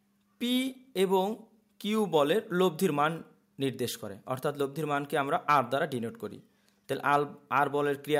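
Nothing stood out as a technical problem on listening to this audio.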